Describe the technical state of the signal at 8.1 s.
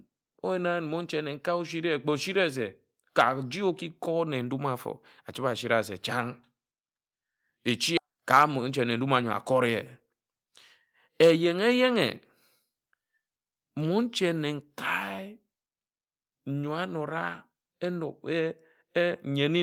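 At 8.1 s there's a jitter buffer speed-up, running to about 9.19 s. The receiver trims pitch-period slices, about a tenth of a second in total, so the speech plays 108% fast, hurried but at unchanged pitch.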